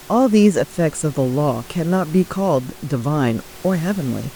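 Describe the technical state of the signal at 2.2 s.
At 2.2 s the speech signal is intact, with only the room's own background noise sitting about 22 dB below the speech.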